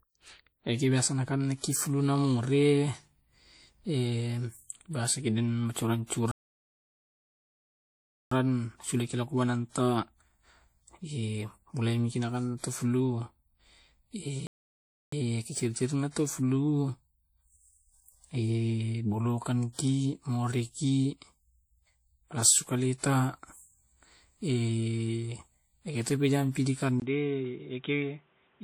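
Throughout, the speech carries plainly audible codec damage, a ringing, washy quality with hiss that rises and falls with the signal. This is likely WMA compression, whose long transform blocks spread quantisation noise over tens of milliseconds; the degree of damage fits a bitrate around 48 kbps.

From 6.31 to 8.31 s the audio drops out for 2.0 s, and again from 14.47 to 15.12 s for about 0.65 s, cutting off mid-flow before resuming. Each is likely a playback stall, where the player starved of data or its thread blocked and output went silent.

At 16.11 to 16.16 s, a sharp attack is preceded by about 50 ms of hiss and sounds smeared. This is pre-echo: the transform codec spread quantisation noise sized for the loud onset across the quiet stretch before it within the same block.

At 27.0 s, after a 20 ms gap, the sound turns duller and narrower until the end, the level drops by around 5 dB, and a new background noise appears roughly 35 dB below the signal. 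This is likely an input switched to a poorer device, such as a lower-grade microphone or a headset call profile.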